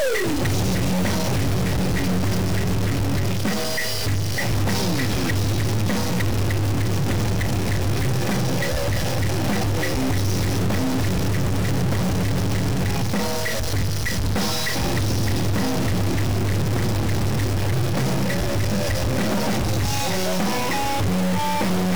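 Throughout, harsh buzzy distortion rides on the sound, and pauses fill with noise. A stuck bit is the likely cause, forcing errors of about -20 dBFS.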